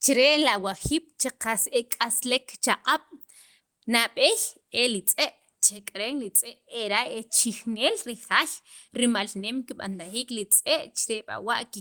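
Clock drift between sender and receiver runs through the whole speech clip. The sender's clock is fast, by around 5 percent. Audio arrives quicker than the receiver plays it out. The jitter buffer keeps filling. The receiver must discard material to hold its delay steady. These discards come at uneven intervals. The result is a string of small timing hiccups rather than one clear break.

Repeated timing corrections follow from this, from 0.00 s to 11.80 s. The receiver trims short pieces again and again. Every edit goes the same way, shortening the sound. Playback runs at 103 percent of normal speed overall. The cuts are small and unevenly spaced. They come across as a slightly rushed, unsteady tempo, with faint skips where a piece has been removed.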